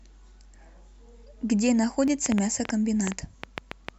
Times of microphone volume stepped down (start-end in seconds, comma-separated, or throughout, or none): none